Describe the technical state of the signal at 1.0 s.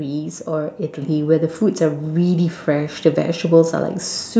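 At 1.02 s the level steps up abruptly: a microphone volume stepped up event. The call software judged the microphone input too quiet and raised the device's input volume in a single increment of about 5 dB rather than ramping it. Because the adjustment happens at the input, the speech and the background noise floor jump together, so the sound after the step is audibly louder and the room noise more prominent than just before it.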